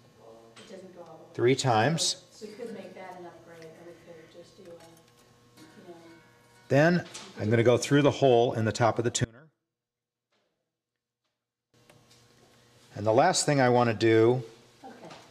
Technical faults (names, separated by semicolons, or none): one channel inverted